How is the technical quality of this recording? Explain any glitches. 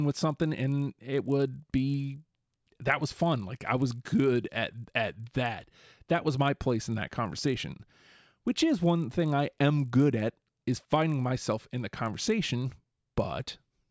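The recording has one steady glitch throughout: a resampler restarted on every block. Each 20 ms block was converted without its neighbours, so every edge carries a small error. That produces a 50 Hz buzz under the speech, in a 24 kHz to 16 kHz conversion.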